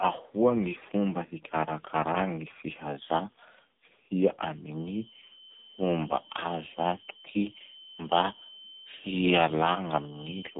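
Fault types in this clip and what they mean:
AMR narrowband mobile codec: heavy buzzy, synthetic speech with nothing above 3.8 kHz, likely from a low-bitrate mobile vocoder rebuilding the voice from a few pulses per frame.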